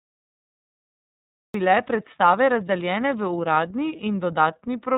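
The whole clip has gone through the iLBC codec, with everything above 4 kHz missing and a plainly rough, slightly synthetic edge that fits its 30 ms frame mode. There's a cut-off start: digital silence until 1.54 s, then the speech jumps in mid-sound with no natural attack. At 3.96 to 4.00 s there's lost iLBC frames, probably a single dropped frame, where the decoder holds a buzzy, vowel-like stand-in before the voice snaps straight back.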